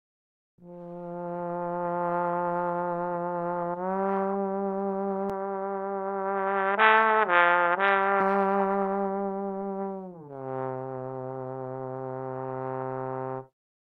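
From 5.30 to 8.20 s the sound turns dull and boxy, with nothing above 3.8 kHz and a faint new noise floor, likely an input switched to a poorer device.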